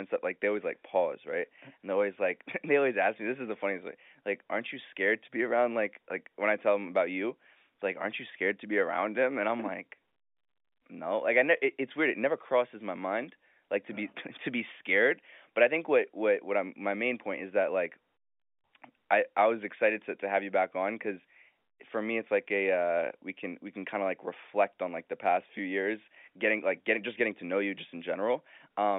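A speech clip carried over a narrowband telephone line, with the sound held to roughly 250 Hz to 3.6 kHz as G.711 coding would leave it. At 27.78 s, just after "getting to know you", there is a brief fault lasting about 2 ms. These are bit errors on a digital phone line. A few flipped bits, at a very low error rate, each corrupt a single sample. Where a sign or high-order bit flips, the sample jumps and clicks audibly.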